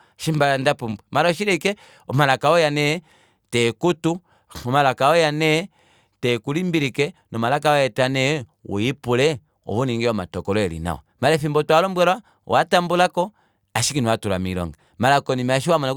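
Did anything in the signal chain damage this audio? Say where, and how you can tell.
No, nothing along the way seems to have hurt this speech recording, and there's no sign of trouble anywhere in the chain.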